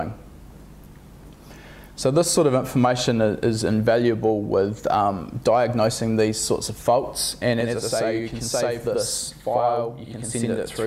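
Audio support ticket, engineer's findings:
Channel delay (doubling) from 7.60 s through to the end. Everything gets a same-level second copy about 85 ms behind, heard as a slap/doubling. Probable component: one channel's buffer path running late before the mono fold-down. The gap fits a 4096-sample buffer. Worth checking that channel's buffering and sync first.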